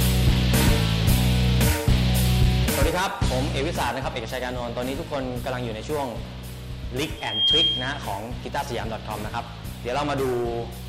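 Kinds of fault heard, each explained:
Hard clipping: From 0.02 to 2.85 s the signal overdrives a stage by about 4 dB, so its peaks are sliced flat. On a waveform the tops form level plateaus. A spectrogram shows broadband harmonic smear above each loud moment, heard as a gritty crackle on peaks.
Loudspeaker feedback squeal: Between 7.17 and 8.14 s a microphone picks up its own loudspeaker, and the loop gain passes one at 3.2 kHz. That tone swells within about a third of a second to roughly 5 dB above the sound. A spectrogram shows one bright horizontal line there, and the waveform envelope grows quickly.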